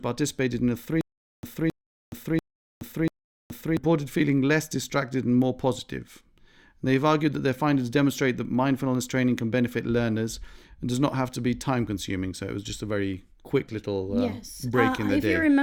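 Right after "in a", from 1.01 to 3.77 s, there's a stutter with silent gaps. A 268 ms burst comes back four times, each followed by 422 ms of silence, every 690 ms. It's likely a stalled stream replaying its last fragment. The audio that should have played there is lost before "feeling less distracted and".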